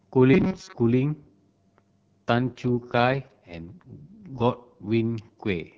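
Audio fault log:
0.34 to 0.75 s, robotic sound from repeated short buffers: the speech hardens into a rigid, metallic buzz at 188 Hz that loosely follows the words. The likely cause is a roughly 5.3 ms stretch being replayed for most of the span while fresh audio is skipped.
2.34 to 4.88 s, AMR rate drop: the AMR wideband (HD Voice) coding falls from 12.65 to 6.6 kbit/s, so the speech turns rough, raspy and synthetic. There is no gap and no narrowing of the band, because the network spends bits on error protection instead.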